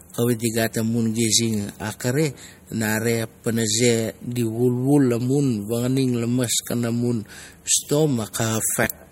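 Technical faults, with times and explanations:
Throughout, MP3 compression: The speech has a plainly audible watery, swirling texture, and nothing is left above 15.9 kHz. This is likely lossy MP3 encoding with too few bits, which fits a low bitrate around 48 kbps. The encoder removed the top band outright and dropped weak frequency lines that flicker from frame to frame. A spectrogram would show a flat, hard ceiling at 15.9 kHz, with speckled gaps and blocky patches below it.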